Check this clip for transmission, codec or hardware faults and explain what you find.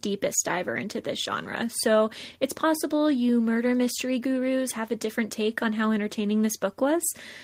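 No technical fault can be heard anywhere in the speech, and the signal stays continuous and stable across the whole recording.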